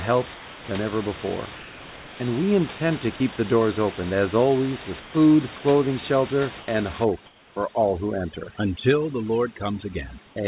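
From 0.34 to 0.68 s, just before "ever before", the room background gives way to a smooth, featureless hiss about 3 dB quieter, then the real background returns with the sound. This is comfort noise in place of the background, likely because the sender's voice detector took the pause as silence and stopped transmitting, leaving the receiver to generate shaped noise. The same swap recurs from 5.0 to 5.14 s, between "open as always with" and "clothing shelter" (about 4 dB down), and from 6.6 to 6.68 s after "clothing shelter" (about 3 dB down).

From 7.04 s to the end at about 10.5 s, the background drops and breaks up into twinkling specks. This is overdone noise removal: a suppressor set too hard switches off frequency bands close to its noise estimate, taking quiet parts of the speech with them. Within this stretch, from 7.26 to 7.56 s, comfort noise again fills a pause at about 2 dB lower level. 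Throughout, the G.711 call path keeps nothing above 4 kHz.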